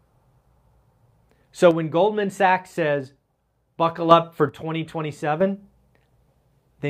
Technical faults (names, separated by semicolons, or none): one channel drops out